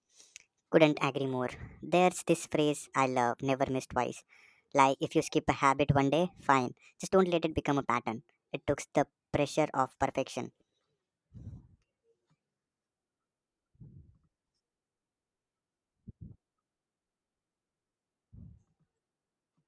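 From start to finish the speech sounds high and hurried, running about 1.38 times too fast and pitched about 5.5 semitones up. That points to a wrong sample rate: audio recorded at 16 kHz being played back at 22 kHz without conversion.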